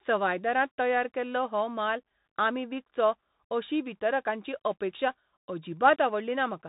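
Throughout, the speech has been carried by a Bluetooth CVSD headset codec, consistent with a 64 kbps link. One up-or-down bit per sample with an adapting step leaves nothing above 3.8 kHz, overloads loud bright sounds, roughens s sounds, and lays a grainy hiss underneath.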